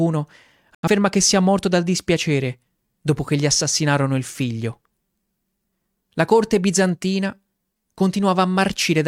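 At 0.75 s the speech cuts out in a digital broadcast dropout until 0.88 s, just before "che sia morto dal". The receiver muted after corrupt or missing frames, about 85 ms of programme lost, which fits a couple of dropped frames. The waveform shows a flat gap; the spectrogram shows a clean vertical blank band.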